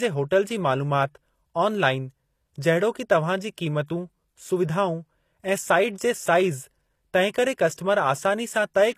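HE-AAC compression, likely, runs throughout: treble above the coded core is rebuilt from copied lower bands, nothing above 14.9 kHz, making s sounds gritty and lispy.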